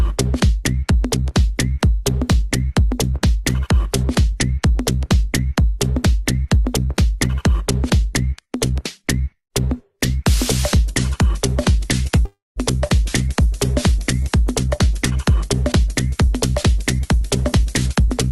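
A call audio freeze runs from 12.25 to 12.59 s: the last sound stretches into a fading buzz or hiss, then about 180 ms of silence, likely from held-up packets emptying the jitter buffer. The audio resumes where it stopped, with nothing lost. From 16.99 s to the end, a jitter buffer speed-up plays the sound at about 108% speed at unchanged pitch, trimming roughly a tenth of a second of built-up delay.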